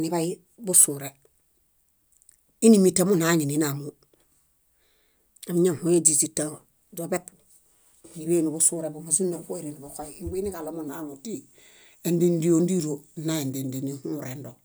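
Wrong sample rate from 10.88 s to the end at 14.65 s: the audio is played back slower than it was captured, with no rate conversion, so speed and pitch drop together. The speech runs at about 0.92 times normal speed and sits about 1.5 semitones lower, sounding heavier and slightly dragged. That ratio fits 48 kHz material being played as if it were 44.1 kHz.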